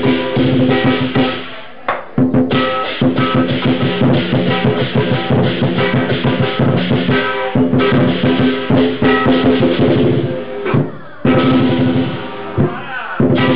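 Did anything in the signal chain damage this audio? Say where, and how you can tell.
No, nothing in the signal chain can be heard damaging this audio. No stage from capture through playback leaves any audible trace on it.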